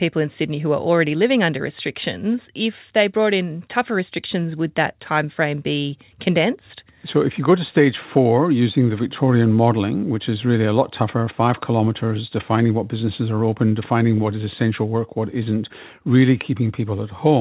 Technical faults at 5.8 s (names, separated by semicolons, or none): none